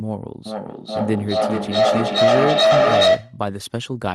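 From 0.46 s to 3.42 s the speech is caught in feedback echo between two devices: a second device in the room replays what this microphone sent, the microphone picks it up again, and the echo canceller cannot remove sound its own device never played. Each stretch returns about every 0.4 s, thinner and more ringing, and the repeats build to about 8 dB above the speech rather than fading. A spectrogram shows evenly spaced stacked copies of the harmonics; the waveform swells instead of decaying.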